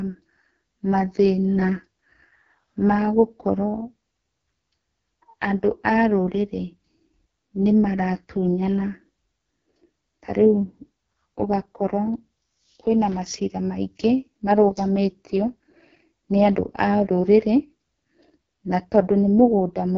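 Speech carried throughout by the AMR wideband (HD Voice) codec at heavy damage, and the rough, raspy texture points to its lowest mode, around 6.6 kbit/s. At that rate the pulse-driven vocal tract model cannot follow the voice finely, so voiced sounds turn grainy and buzzy. On a spectrogram, energy stops sharply near 7.4 kHz, the band above 6.4 kHz looks like smeared noise rather than harmonics, and the lower harmonics appear blurred and blocky.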